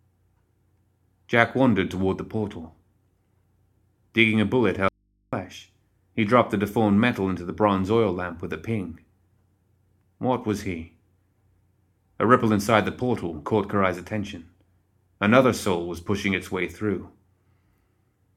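Just after "a bullet", at 4.89 s, the speech cuts off abruptly for about 0.44 s until 5.33 s, leaving only a low hum roughly 45 dB below the voice. This is an audio dropout to a faint residue, likely the signal feed breaking while the input stayed live.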